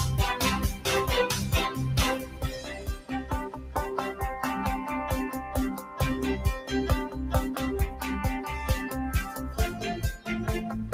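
A noise suppressor built for speech was left running across the whole clip, so this is a noise suppressor applied to music or sounds. It cannot tell sustained content from background hiss, so it keeps reaching in to pull level down, with the gain it removes swinging over a range of about 10 dB. Onsets pass mostly intact while held parts and decays sag, which leaves the audio pumping and thinning rather than sitting at a steady level.

Three stretches show sound cut by the noise suppressor, where it judged the material to be noise and pressed it down harder than its surroundings. From 2.19 to 3.33 s, about a second in all, the sound sinks by as much as about 10 dB, and sustained energy drains away. From 3.5 to 3.76 s it dips again by up to about 8 dB for a few tenths of a second. A lighter cut follows at 5.78 to 5.99 s, about 5 dB at its deepest, briefly hollowing the sound.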